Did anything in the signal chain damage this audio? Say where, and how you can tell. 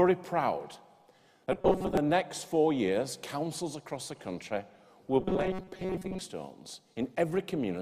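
Yes: a likely buffer underrun repeated about 5 ms chunks, causing robotic sound from repeated short buffers, a rigid 188 Hz buzz at 1.52–1.97 s and 5.20–6.21 s.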